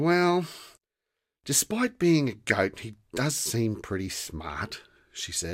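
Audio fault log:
2.49 to 2.51 s, DAB burbling: a brief burble over the speech. Weak reception lets bit errors slip past error correction into the MP2 data; corrupted samples put short noise blips in single sub-bands, and corrupted scale factors make sub-bands jump in level. The errors hit three frames.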